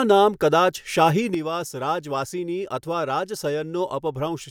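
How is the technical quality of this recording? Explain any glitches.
The recording has one clear glitch, a sudden gain jump. At 1.34 s, right after "નામ કદાચ શાહી", the speech and background noise both drop about 7 dB at once and stay down to the end. A digital gain change applied without a ramp is the likely cause. On the waveform, the envelope shrinks abruptly at that point, and the spectrogram darkens evenly across all frequencies.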